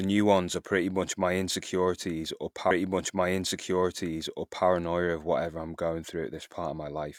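A speech clip in which, at 2.67 s, the audio jumps back and replays nearly two seconds of what was just heard, running again until 4.63 s, with a small blip at the jump. This is a stream segment repeated: the player fetched or queued the same segment twice.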